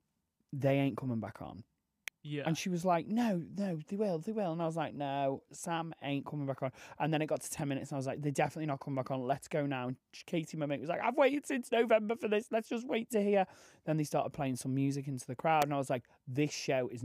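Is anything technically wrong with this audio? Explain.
Yes. Electrical switching spikes occur at 2.08 s, just after "ain't coming back on", and at 15.62 s, after "some music into the". Each is a sharp snap over the speech, peaking around -20 and -15 dBFS, likely from a nearby switch arc.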